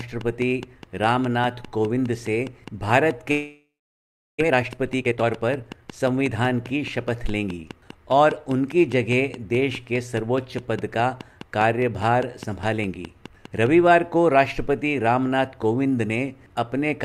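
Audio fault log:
0.00–13.67 s, train of clicks: roughly 70 identical clicks at a steady 4.8 per second, peaking about 5 dB above the sound. The regular, uniform pattern, unlike random crackle, likely points to interference.
3.31–4.42 s, long network dropout: about 1.1 s is filled in, a fading buzz that settles into roughly 0.73 s of silence. When audio resumes, about 0.6 s has been skipped, which separates this from a brief gap. Likely cause: lost network audio.
4.44–6.43 s, jitter buffer speed-up: the sound runs hurried at about 123% speed while the pitch stays unchanged, unlike a tape-speed error. About half a second of accumulated delay is trimmed away.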